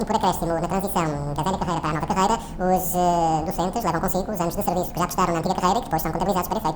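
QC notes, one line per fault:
Throughout: audio read two samples at a time (double speed). Pairs of samples are treated as one frame, so everything runs twice as fast and 12 semitones higher.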